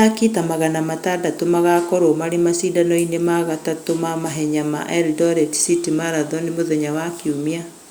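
No technical faults can be heard anywhere in the speech recording.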